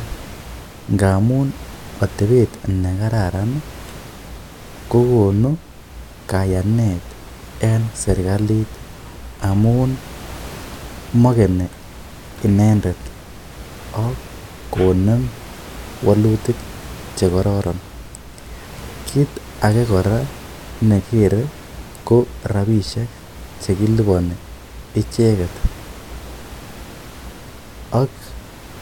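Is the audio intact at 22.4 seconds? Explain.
Yes, the audio is intact at 22.4 seconds, with only the room noise of the recording space sitting about 19 dB below the speech.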